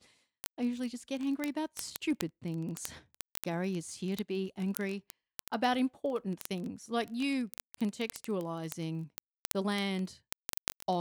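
Speech, with word clock ticks running from 0.11 s right through to the end at about 11 s. You get a steady stream of sharp clicks, roughly one every 20 ms, so hundreds of them, and they don't all hit equally hard. That points to a digital input running on its own clock, off from the sender's by something like a tenth of a percent, so every time the two clocks slip past each other a single sample gets dropped or repeated.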